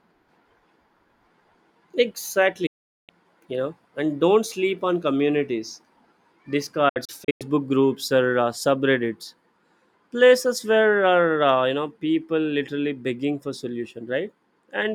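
The receiver lost valid frames twice, a digital broadcast dropout, and muted until good data returned. From 2.66 to 3.10 s the sound fades in 8 ms to about 0.42 s of silence before "you know and". Between 6.89 and 7.42 s it breaks into several short holes, the longest about 0.1 s.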